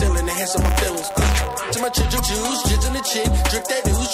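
Buffer tearing runs from 0.6 to 1.63 s: the write and read positions in the ring buffer have drifted into each other, so every 10 ms period carries a small slice, about two percent, of audio left over from one lap earlier, roughly 20 ms old. Each stale slice is butted against fresh audio with hard edges, and that repeating seam produces a steady, robotic 100 Hz buzz riding on the sound.

Damaged data in a compressed stream follows from 2.16 to 2.20 s. A stretch of the encoded stream is corrupted, so the decoder misreads those frames, loses its place and hunts for the next valid frame header before resuming. The result is a brief chirp, squawk, click or short hole lasting about 40 ms.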